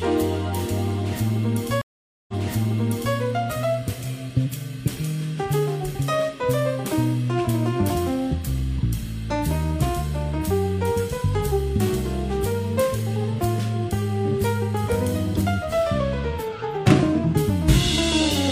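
At 1.81 s there's a stream reconnect: the connection drops and you get roughly half a second of dead air (467 ms). When audio comes back, a fresh decoder picks up mid-stream, but the server has resent a burst, so playback resumes about 0.88 s earlier than where it cut out. You hear that stretch of sound play a second time, and the whole disruption settles by around 3.16 s.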